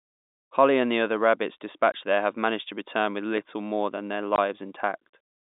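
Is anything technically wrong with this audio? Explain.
Yes. At 1.92–1.94 s, just after "and the other rabbits", and again at 4.36–4.38 s, after "more than their", there is packet loss filled with silence. One 20 ms packet drops out each time and zeros replace it, so the sound cuts to dead silence with hard edges. The gap length, a single packet's worth, distinguishes it from the shorter flat spot.

At 3.37 s, between "managed to return with" and "more than their", an underrun with a held sample flattens the waveform for about 5 ms, which fits a 256-sample buffer running dry. The converter holds its last value rather than dropping to zero, so the onset is nearly silent. Roughly 5 ms of live audio is skipped. Across the clip, the narrow telephone band of the G.711 coding is audible.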